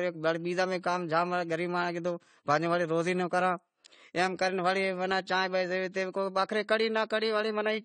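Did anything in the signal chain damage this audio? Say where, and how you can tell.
Yes. At the codec stage, throughout the speech, nothing survives above 9 kHz, sibilants turn fizzy and vowels warble. This is likely AAC compression, consistent with AAC-LC near 32 kbps discarding high bands. A spectrogram shows a flat ceiling at 9 kHz.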